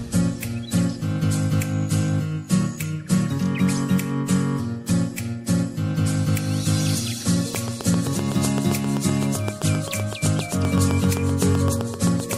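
From 7.55 s to 12.34 s a train of clicks runs over the sound: sharp, near-identical pulses at a steady 7.7 per second, about forty in all, each standing roughly 10 dB above the surrounding material. The ticking continues through quieter passages as well, so it is not tied to the program content. A regularly repeating pulse of this kind most likely comes from electrical interference coupling into the chain or a faulty connection or power supply.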